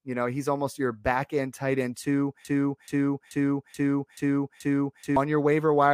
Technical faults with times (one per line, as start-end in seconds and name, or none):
2.45-5.16 broken-record loop